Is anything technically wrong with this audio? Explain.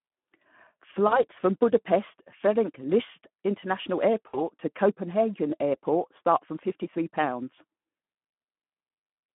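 Yes, two faults. Throughout, the speech was coded with the Speex codec at a low setting, which fits about 11 kbps, over a 150 Hz to 3.4 kHz telephone band. Too few bits for the excitation make the voice plainly noisy, hoarse and thin.

From 1.07 to 1.24 s and from 4.27 to 4.41 s, there is VoIP packet loss concealed by the speech codec. About 40 ms and then 60 ms of audio went missing, which fits two and three 20 ms frames. The decoder extended its last pitch and filter at falling gain, so each gap turns into a fading, stretched smear. Because each frame builds on the one before it, the voice stays weak or distorted briefly after packets resume.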